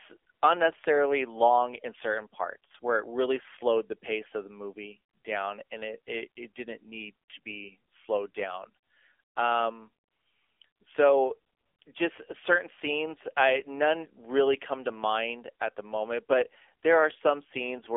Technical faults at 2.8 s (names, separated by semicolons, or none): AMR narrowband mobile codec